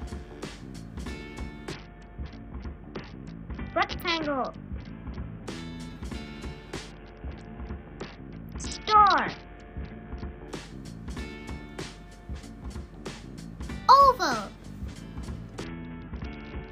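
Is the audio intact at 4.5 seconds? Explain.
No, 4.5 seconds falls inside a Bluetooth SBC bit pool drop running from 1.72 to 5.46 s. The link starved the encoder, which sounds like a cut to around 55 kbps, so the top sub-bands lose their bits: treble goes dull and gritty noise creeps in.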